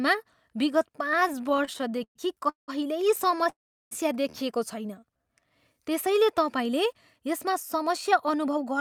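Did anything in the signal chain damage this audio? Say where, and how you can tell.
Yes. The damage is in the network path and the receiver's jitter buffer. Repeated stalls (stutter) run from 1.15 to 2.70 s, with 22 short holds totalling about 0.5 s, the longest 186 ms. A briefer burst follows at 3.28 to 3.47 s, with five holds of at most 12 ms. Packets arrived late, the buffer kept emptying, and each hole was filled by extending the last sound.

A call audio freeze spans 3.49 to 3.93 s. The speech stops, a short fading continuation gives way to about 370 ms of silence, and then it resumes where it left off. That 420 ms hold is likely a network delay that drained the buffer and added delay.

A jitter buffer slow-down runs from 5.00 to 5.75 s, ending just before "त्यसैले तपाईँले". The speech plays at 87% speed with the pitch unchanged, and vowels sound stretched. The receiver repeated pitch periods, adding 110 ms to refill its reserve.

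A jitter buffer speed-up covers 7.48 to 8.79 s. The speech runs at 106% speed with the same pitch and sounds slightly hurried. The buffer had built up excess delay, so it trimmed roughly 70 ms of short pitch-period pieces to catch up.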